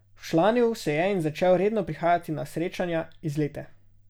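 No technical faults can be heard anywhere in this recording.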